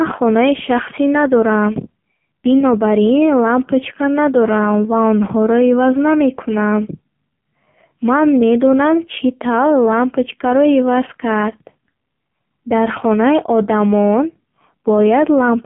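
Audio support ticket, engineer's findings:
Whole clip, start to finish: AMR narrowband mobile codec. Speech band-limited to roughly 150 Hz to 3.4 kHz, nothing above 3.5 kHz, so it's dull and boxy, no sibilance up top. Component: mobile voice path, AMR-NB. Heavy codec damage, voice sounds buzzy and synthetic, pulse-excited vocal-tract model starved of bits. Fits a low-rate mode, around 5.9 kbps. Probably a cellular leg on the call route.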